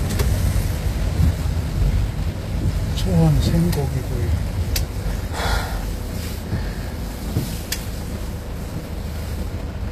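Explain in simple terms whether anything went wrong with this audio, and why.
The treble across the whole recording sounds gritty and plainly metallic, and nothing is heard above about 14.9 kHz. This likely comes from HE-AAC compression, which keeps the lower sounds and fakes the top end by copying lower bands upward, so the highs don't quite match.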